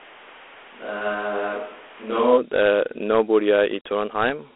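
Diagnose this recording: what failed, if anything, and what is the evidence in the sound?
The codec stage shows Dialogic VOX ADPCM throughout. The sound is confined to a telephone band of about 300 Hz to 3.4 kHz, nothing at all above 3.9 kHz, and a gritty hiss rides on the speech. A 4-bit adaptive quantiser tracks the waveform coarsely, so the error noise rises and falls with the signal. A 32 kbps rate points to 8,000 samples a second. Unlike plain band-limiting, the grit is tied to the speech itself.

The first 2.37 s, already under way when the clip starts, sound roomy and hollow, with thinner bass, a level roughly 5 dB lower and more background noise, around 25 dB under the speech. At 2.37 s this changes abruptly to a close, fuller sound. The likely cause is a switch to a distant microphone, a capture-chain fault in the analogue front end, before the codec. A gain drop alone would not add room reflections, and reverb added in processing would not thin the bass or raise the background noise.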